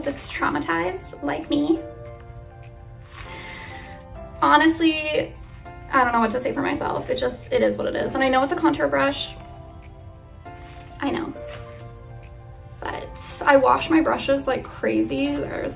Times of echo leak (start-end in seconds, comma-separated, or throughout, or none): none